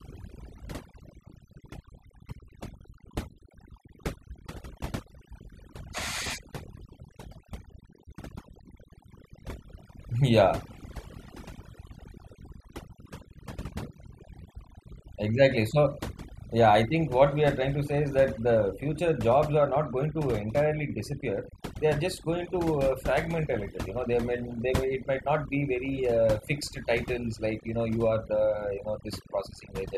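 A speech recording marred throughout by overdone noise removal: the gaps between phrases collapse to near silence dotted with twinkling specks. The reduction was set so aggressively that individual frequency bands near the noise estimate are pushed down or switched off, taking quiet parts of the voice with them. Unlike a simple noise gate, which shuts everything at once, this flickers band by band.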